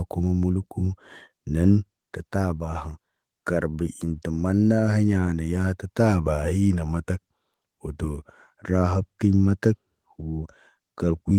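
No technical faults are audible.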